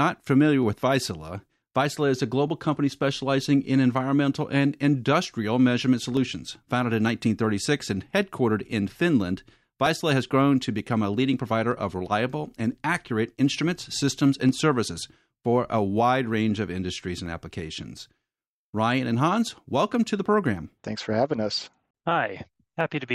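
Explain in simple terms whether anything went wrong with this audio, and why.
Something did go wrong. From 0.63 s to 22.81 s, the speech has a click roughly every 0.92 seconds, about thirty in all. The steady rhythm gives it away. This is most likely clock drift buffer slips. Two devices kept time with clocks that disagreed by roughly 400 parts per million. The buffer between them kept drifting. About once a second it dropped or repeated a tiny block of samples, around fifteen at a time, and each jump clicked.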